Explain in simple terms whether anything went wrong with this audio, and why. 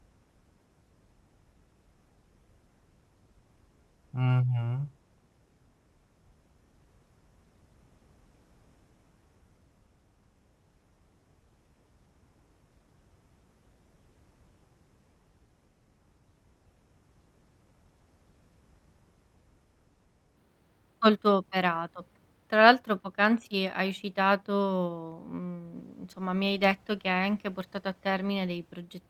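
From the start until 20.4 seconds, the speech is a section at the wrong speed. It plays at about 0.61 times its real speed, so it sounds slow and dragged out. Because speed and pitch move together, the voice also drops, by roughly ten semitones, and sounds much deeper than it should. After 20.4 seconds it returns to its true speed and pitch. The likely cause is that this part was played or edited against the wrong clock.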